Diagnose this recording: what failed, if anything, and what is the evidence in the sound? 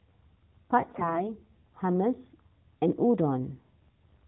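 The failure is on the network link feeding the codec: AMR bit errors from 0.80 to 1.33 s. The speech keeps its pitch and level but turns hoarse and gargly, which fits several percent of unprotected bits flipped across a run of 20 ms frames, misplacing excitation pulses and fine gain values.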